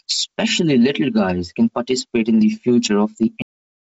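A speech recording that pumps throughout, with a gain swing of around 10 dB, likely from gain set far too high with a fast limiter pulling it back. At 3.42 s the sound is a cut-off end, stopping mid-sound into digital silence with no decay, unlike a fade or a natural tail. The call path rolls everything off above 8 kHz, which fits G.722 at 64 kbps.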